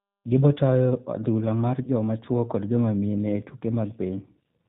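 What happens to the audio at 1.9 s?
From 1.83 to 1.89 s the speech turns briefly into a buzzy tone or coloured noise that fades, then sounds weak or distorted as it resumes: VoIP packet loss concealed by the speech codec, covering about 20 ms of missing audio by extrapolating the last pitch and filter. Throughout, including here, the speech is band-limited and slightly rough and synthetic, the G.729 codec sound, which fits an 8 kbit/s G.729A stream.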